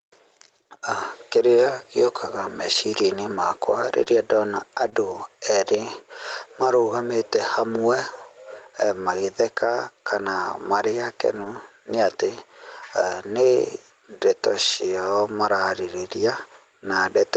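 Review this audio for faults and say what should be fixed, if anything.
Throughout the speech, the level pumps with a swing of roughly 5 dB that flattens the dynamics. This gain pumping is likely caused by microphone gain set too high, with a fast limiter pulling it down on every peak.

At 4.03 to 4.08 s and again at 4.90 to 4.94 s there is a brief smear or wobble. This is short concealed packet loss: about 20 ms of audio failed to arrive, and the receiver bridged each hole by extending the preceding sound before blending back in.

At 4.86 s, and for about 60 ms from 11.36 to 11.46 s between "magĩtheka kana marĩ" and "nĩ atĩ", the sound turns briefly rougher and noisier without any gap. These are lost packets rebuilt from error correction. The decoder played the low-bitrate Opus backup copies carried in following packets. The longer stretch points to three packets lost. The 8 kHz upper limit from the 24 kbps call path is expected behaviour rather than a fault.

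To prevent these, lower the microphone input gain so the limiter rarely engages, and improve the network link or enlarge the jitter buffer so fewer packets arrive late or go missing.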